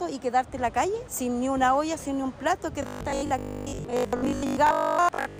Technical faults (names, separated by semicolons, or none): robotic sound from repeated short buffers